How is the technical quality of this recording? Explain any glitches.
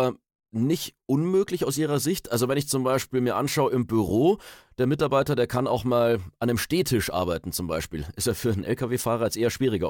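Nothing stood out as a technical problem on listening to this speech recording, so there are no glitches to explain.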